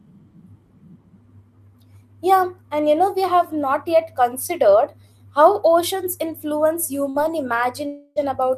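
A speech recording with two gaps. Right after "considered how oceans influence", a burst of packet loss at 7.09 to 7.18 s leaves a brief filled-in stretch of about 50 ms, and roughly 60 ms of speech never returns. From 7.87 to 8.19 s, a longer concealed stretch fades but never reaches silence, and about 300 ms is skipped. Its length points to a long network dropout as the likely cause rather than a short burst.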